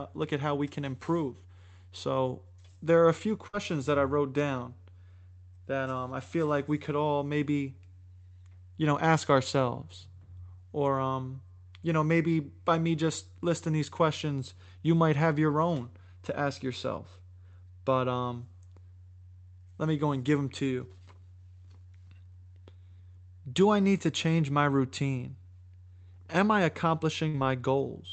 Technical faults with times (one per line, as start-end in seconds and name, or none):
3.47-3.55 burst of packet loss
27.29-27.36 short concealed packet loss